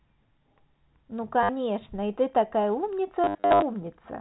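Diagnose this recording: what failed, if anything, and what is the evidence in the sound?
Packet loss with last packet repeated, at the network stage: a 60 ms stutter at 1.43 to 1.49 s, then scattered dropouts across 3.24 to 3.62 s, the longest run 70 ms. The receiver replays the previous packet, so runs buzz near 100 Hz, fitting 10 ms packets.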